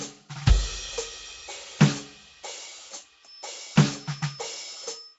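From the start the music carries a rough, hissy halo and a smeared, underwater texture, with nothing above 7.7 kHz. This is likely Nellymoser compression: coarse block coding leaves weak bands unallocated and refills them with noise, at a rate consistent with 32 kbps.

At 3.19 s a thin, steady whistle at 5.2 kHz appears and runs to the end, sitting well below the music and swelling and fading slowly in level. This points to a feedback whistle, likely from a loudspeaker-to-microphone loop held just short of runaway.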